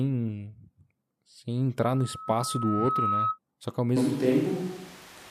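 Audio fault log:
1.80 to 3.39 s, loudspeaker feedback squeal: the microphone re-captured its own loudspeaker and the loop gain passed unity at 1.3 kHz, so a single tone swells over roughly a second until it sits at about the level of the speech, then stops.
3.97 s to end, switch to a distant microphone: after "que ao" the sound likely comes from a farther pickup instead of the close one, so the speech turns abruptly roomy and hollow, thinner in bass, with room noise about 25 dB below it, though overall level barely changes.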